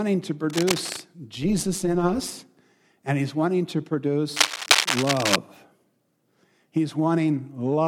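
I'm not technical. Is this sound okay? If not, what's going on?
No, there are two kinds of fault in this speech clip.

From 0.49 to 1.01 s, and again from 4.35 to 5.36 s, a harsh scratching, crackling rustle sits on top of the speech. The first burst is a little quieter than the speech, and the second is about as loud as the speech itself. This is cable scratch noise. It is likely caused by a worn cable, plug or knob being moved, so the electrical contact keeps flickering and spraying bursts of noise into the sound.

From 1.42 to 2.33 s, the speech takes on a rough, buzzy, robotic tremble, as if its loudness were being rapidly pumped up and down, roughly two hundred times a second. This is overlap-add ripple. Some processing chopped the audio into many short overlapping slices and stitched them back together unevenly, so the level dips and swells once per slice.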